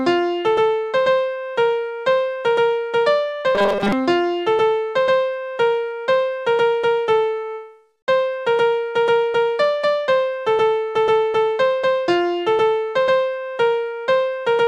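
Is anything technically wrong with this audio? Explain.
Yes. From 3.55 to 3.93 s there is robotic sound from repeated short buffers. The passage becomes a rigid, metallic buzz pitched at 200 Hz that only loosely tracks the underlying sound. The likely cause is new audio arriving too slowly, so playback repeats the last short buffer to fill the gap, which fits a 5 ms buffer. Roughly two-thirds or more of that stretch is repeated material rather than real audio.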